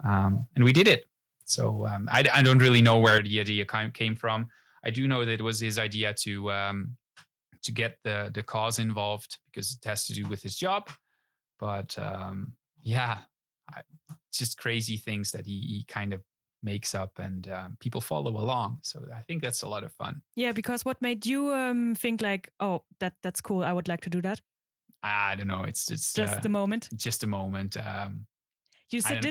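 From 0.60 to 0.94 s and again from 2.14 to 3.18 s there is microphone overload, most likely from input gain set about 6 and 7 dB too high. Peaks hit the converter ceiling and are sliced off, which adds a harsh crackle. The waveform shows flat-topped peaks, about 3% of samples, and the spectrogram shows broadband smearing above the harmonics.

At 3.18 s, just before "the idea came from", the microphone volume is stepped down. The level drops abruptly by about 7 dB, likely an automatic gain reduction in response to the clipping. The waveform envelope narrows in a single step.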